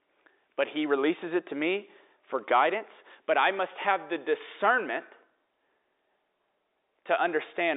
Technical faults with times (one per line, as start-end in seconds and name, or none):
none